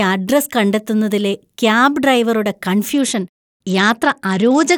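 A Bluetooth SBC bit pool drop begins at 2.94 s and runs to the end of the speech. The encoder cut its bit budget sharply, consistent with a fall from a bit pool of 31 to about 11, near 83 kbps, so upper sub-bands starve: treble dulls and gritty quantisation noise rises.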